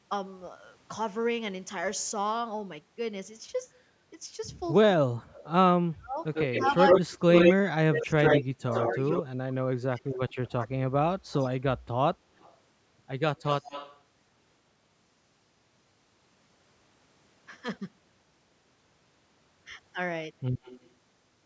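Echo leak runs from 4.64 to 9.22 s, again from 10.14 to 14.0 s, and briefly at 20.63 to 20.89 s in this speech clip: a copy of the speech trails it by 97 ms, about as loud as the speech at first, then about 15 dB down, and finally about 25 dB down. The likely cause is a loudspeaker at the far end whose echo canceller let its microphone pick-up slip back into the call. Speech suppressed in double talk spans 4.96 to 11.27 s, overlapping the first leak. The speech sinks by up to about 30 dB, with affected stretches totalling around three seconds, likely because the echo canceller, faced with both sides at once, could not tell the talker from the echo and turned everything down. The band stops at 8 kHz, as expected from call microphone processing.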